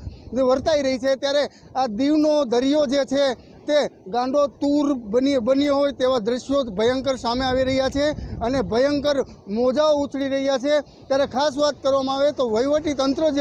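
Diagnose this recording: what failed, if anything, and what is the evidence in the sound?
Nothing failed, and the sound holds no evidence of any fault.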